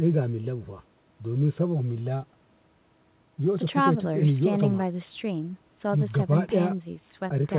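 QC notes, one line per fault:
Nothing stood out on listening, with the speech carried over a G.711 mu-law call path at 64 kbps that holds nothing above 4 kHz.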